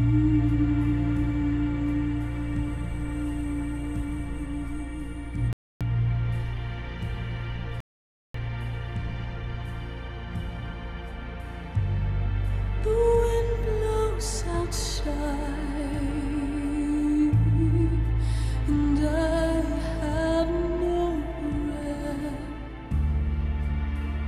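At 5.53 s the audio halts for a rebuffering stall of about 0.28 s, then again at 7.80 s for about 0.54 s. Each time, the player exhausted its downloaded audio and waited for more to arrive. Silence cuts in, and playback picks up at the exact point it left off. Unlike a dropout or packet loss, nothing is skipped or concealed; the gap only adds time.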